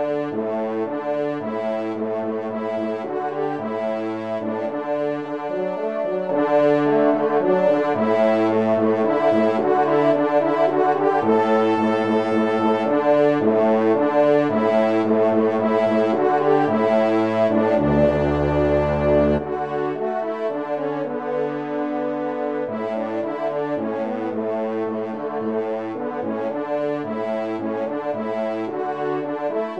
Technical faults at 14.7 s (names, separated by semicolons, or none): none